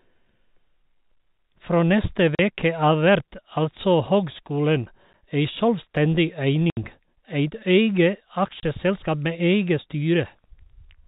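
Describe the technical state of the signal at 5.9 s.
At 5.9 s the speech is intact, with nothing above 4 kHz as expected of G.711 telephone coding and only a faint quantisation noise following the level of the voice.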